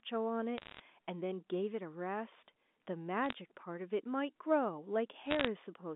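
Bit errors on a digital phone line strike three times, from 0.58 to 0.80 s, from 3.26 to 3.33 s and from 5.26 to 5.47 s, heard as short bursts of sharp ticks and crackle laid over speech that itself stays intact. Flipped bits in the G.711 A-law stream each corrupt a single 8-bit sample, and hits on the sign or upper bits throw that sample far off, producing each click. The density suggests an error rate under one percent.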